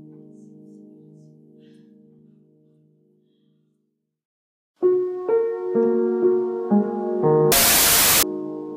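Wrong sample width, from 7.52 to 8.23 s: the audio becomes a loud wash of noise with the original sound faintly buried inside it, running at 1.5 times its proper speed and pitch. This fits 16-bit data being read as packed 24-bit samples. Each sample is stitched together from misaligned bytes, so many values are garbage, and only some keep the true signal's upper bits.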